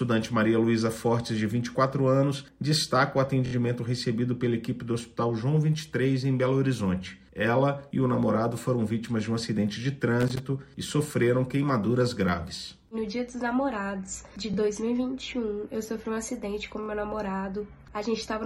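At 3.46 to 3.53 s, new audio failed to reach the device in time, so it replayed its last buffer three extra times. This is a repeated buffer fault. A piece of about 23 ms, which fits a 1024-sample buffer, sounds four times in a row with hard joins, giving a quick stutter. Little or no audio is lost.

From 10.20 to 10.40 s, a loose connector crackle: an unreliable contact keeps making and breaking, chopping the signal into an irregular burst of scratchy crackle.

The buffer repeat returns at 14.54 to 14.56 s with one extra play, heard as a brief doubled blip, and at 16.83 to 16.88 s with two extra plays, a short triple stutter.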